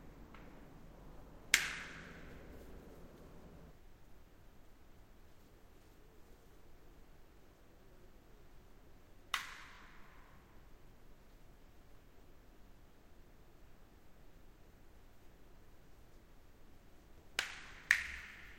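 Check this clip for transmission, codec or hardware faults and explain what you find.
There's one fault, a Bluetooth stutter from 9.75 to 9.80 s. The link missed data, so the receiver replayed its last slice of about 23 ms, which fits one dropped packet. You hear a brief repeat, then the sound picks up later, skipping ahead.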